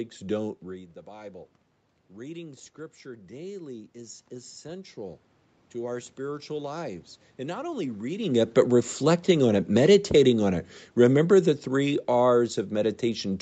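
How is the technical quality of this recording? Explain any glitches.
The recording has two slow level drifts caused by automatic gain control. They ride on a call path whose content stops sharply at 8 kHz, which shows as a flat ceiling on a spectrogram.

Between 2.14 and 5.28 s comes automatic gain rising. After the talker drops back and the input falls by about 16 dB, the gain control gradually adds about 7 dB. Voice and room noise swell together leading into "to our spiritual lives". On a waveform, the envelope and the noise floor widen steadily together.

Between 8.56 and 12.5 s, just after "not only reading it", comes automatic gain falling. The talker moves around 8 s, the control judges the input too loud or its background noise too strong, and it eases its gain down by about 5 dB. The voice sinks along with its background, so the waveform tapers and the spectrogram's noise floor darkens in step.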